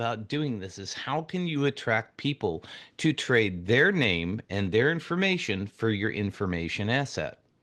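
It's a speech clip, and at 1.56 s the whole thing jumps up by about 3 dB in one go, voice and background together. That's the microphone volume being stepped up: the call software decided the input was too quiet and raised the device level mid-stream, over the call path's roughly 12 kHz bandwidth.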